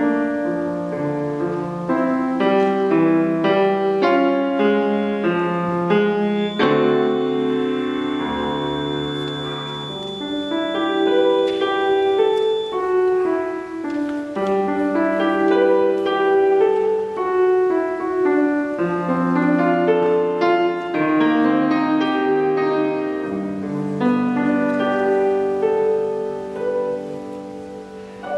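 From 6.30 s to 12.82 s a feedback whistle sits behind the sound: a thin, steady tone at 3.5 kHz, roughly 15 dB under the main signal, swelling and fading slowly in level without growing. The likely cause is a loudspeaker-to-microphone loop held just at the edge of feedback, where gain at that one frequency is enough to sustain the ring but not enough to let it run away into a howl.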